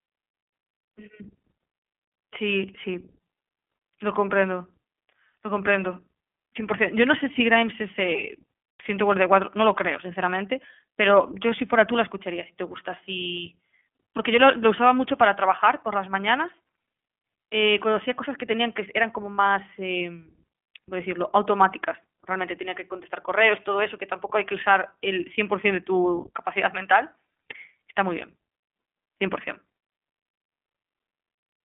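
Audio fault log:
throughout, iLBC codec: the speech is band-limited and plainly coded, with nothing above about 3.6 kHz and a thin, telephone-like band from roughly 250 Hz to 3.4 kHz, so sibilants lose their edge and the sound turns slightly rough and synthetic. The codec rebuilds the excitation of each 20 ms frame on its own, without borrowing from the frame before, and its narrowband coding, at 15.2 kbps, discards the upper spectrum entirely.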